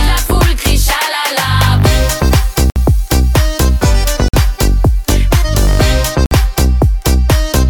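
At 2.70, 4.28 and 6.26 s the sound drops out for about 50 to 60 ms and resumes, a likely Bluetooth stall where delayed packets drained the headphones' buffer. The waveform shows flat silent gaps; the spectrogram shows clean vertical blank bands.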